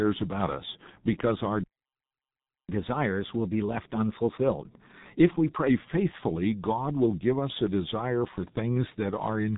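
Throughout, the speech is band-limited at 3.8 kHz and sounds muffled and hoarse, with smeared consonants: the signature of heavy G.723.1 codec damage, fitting a rate near 6 kbit/s. Unlike a simple low-pass filter, the coder's slow-updating voice model adds roughness and blurs fast transitions.

From 2.69 s to 5.69 s, right after "about us because our", catch-up at higher speed sets in: playback runs 1.1 times fast while draining a backlog, and pitch rises by about a semitone and a half. Because pitch moves with tempo, this is resampling rather than time-stretching.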